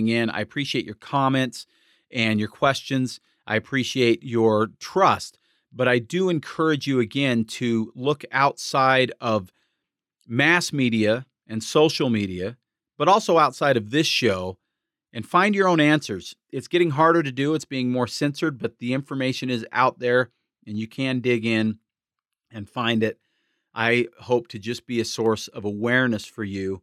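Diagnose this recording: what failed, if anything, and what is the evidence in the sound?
Single sharp clicks at 1.63, 25.26 and 26.24 s: likely dropped samples in the driver or buffer, a sliver of a millisecond skipped so the waveform jumps.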